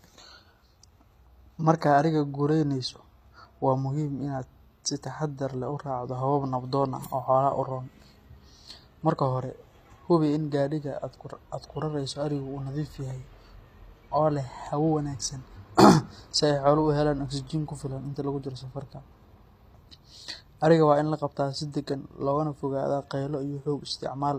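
From start to finish the speech carries HE-AAC compression damage, likely from a low bitrate around 24 kbps. The treble is rebuilt by copying lower bands upward, so s sounds come out gritty and lispy, and nothing survives above about 14.9 kHz.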